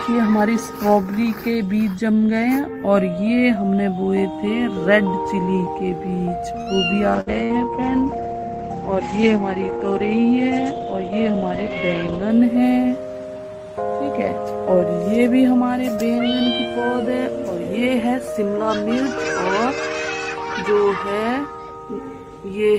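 At 6.61 s a short stall from a late packet occurs. A packet missed its playout time and the jitter buffer ran dry, so the receiver stretched the last sound by about 52 ms until it arrived. Nothing is lost, but that moment hangs briefly.

At 7.20 s the call bitrate drops. The bandwidth estimate fell and the encoder went from 32 to 13 kbps, with audio bandwidth narrowing from 20 kHz to 8 kHz. Until about 12.36 s the sound is coarser and duller, lacking its top end.

During that drop, two bursts of packet loss occur, from 7.21 to 7.29 s and from 7.44 to 7.55 s. Each time about 60 ms of audio never arrived in time. The receiver extended the last sound as a fading fill, then jumped ahead past the missing stretch.

From 12.22 to 12.62 s a jitter buffer speed-up occurs. Too much audio had built up in the buffer, so the receiver trimmed short pitch-period slices, roughly 40 ms in total. Playback runs about 9% fast at unchanged pitch, briefly sounding hurried.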